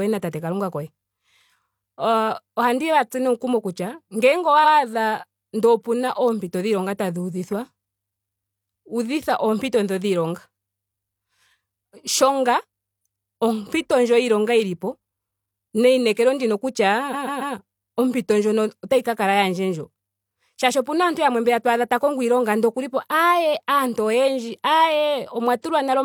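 At 4.60 s a 93 ms block of the speech plays twice, and between "neinekelo ndino" and "ompito ndjino otayi ka" a 139 ms block plays three extra times (17.09 to 17.51 s), adding 418 ms. These are repeated frames: the identical, frame-sized stutters point to re-sent compressed frames rather than an echo.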